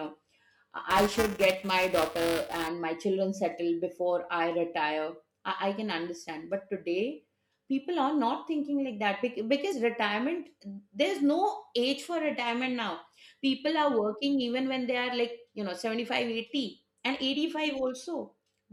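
A speech recording with two faults. From 0.90 to 2.68 s there is buffer tearing: the software writing the playback ring buffer and the hardware reading it have drifted, so they cross inside every period. A small slice of each buffer replays audio from roughly 5 ms earlier, giving a steady robotic buzz at 375 Hz, which fits a 128-sample buffer. From 9.69 to 9.73 s there is damaged data in a compressed stream: corrupted bytes make the decoder lose frame sync and hunt for the next header, producing a brief glitch.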